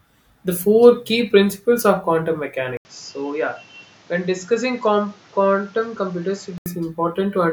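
From 2.77 to 6.66 s, after "key principles of quantum", the input likely switched to a poorer device. An 80 ms gap marks the switch, then the speech turns duller with nothing above 7.6 kHz, drops roughly 5 dB, and gains new background noise.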